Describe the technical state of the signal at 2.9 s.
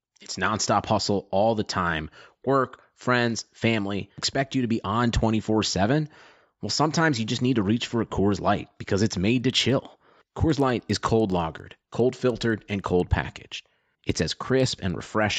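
At 2.9 s the speech signal is intact, with no audible fault at that moment.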